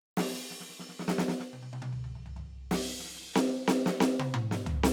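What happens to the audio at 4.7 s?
At 4.7 s the music plays through cleanly, with no dropout, click, distortion or other technical fault to be heard.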